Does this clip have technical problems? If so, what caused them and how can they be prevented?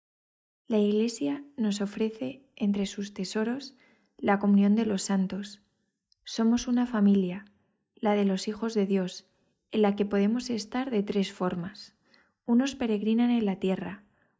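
No, nothing in this speech clip stood out as a technical problem on listening.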